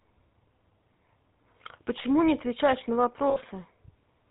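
A speech clip carried throughout by the GSM full-rate codec, whose damage is plainly audible: the voice has a buzzy, gravelly roughness because the codec rebuilds it from a vocal-tract model excited by a sparse, regularly spaced pulse train, and nothing above 4 kHz gets through, so the top end is dull and band-limited. The sound points to the original 13 kbps full-rate mode rather than a later GSM codec. From 3.30 to 3.37 s there are lost GSM frames, a gap of about 60 ms. The decoder fills it by holding the parameters of the last good frame, so the sound freezes into a brief rough, metallic ring before normal decoding resumes.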